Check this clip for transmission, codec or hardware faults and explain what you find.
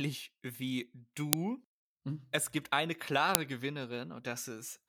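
One fault appears twice in this speech clip. At 1.33 s and 3.35 s, a file header is played as audio. Leftover header bytes decode as samples, producing a sharp, loud click.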